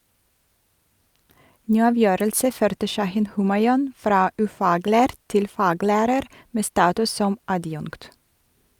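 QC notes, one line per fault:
No faults heard anywhere in the speech.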